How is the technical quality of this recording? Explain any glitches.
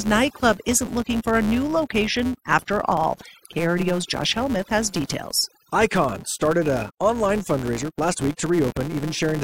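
The technical quality is poor: two processing faults run through the entire speech clip.

Overdone noise removal is present from start to finish. The noise reducer is set far too aggressively, so any frequency band that comes close to its noise estimate is pulled down hard or muted. The quieter components of the voice are removed along with the noise. Between phrases the background drops to near silence, broken by twinkling specks. The speech itself has its softer detail hollowed out.

A filter restarted on every block also runs the whole length. The filter discards its internal state at each block boundary and begins every block from zero, leaving a small transient at each join. Those transients repeat at about 172 Hz, which fits a 256-sample block. The result is a steady buzz under the voice that rises and falls with the speech level, loudest on strong passages and fading in the gaps.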